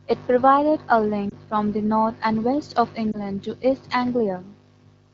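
At 1.29 to 1.34 s and again at 3.12 to 3.18 s, the speech briefly dips and warbles. These are lost AMR speech frames. Radio errors corrupted the data, so the decoder discarded it. It filled the gap by repeating the last good pitch and vocal tract settings at reduced gain. Each dip is short, which fits a single lost 20 ms frame. The AMR wideband codec underneath runs at 12.65 kbit/s, and the surrounding speech is clear.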